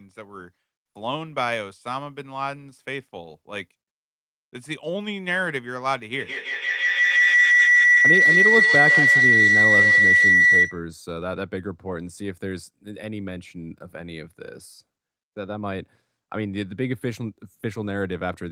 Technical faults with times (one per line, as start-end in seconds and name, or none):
6.14-10.83 feedback howl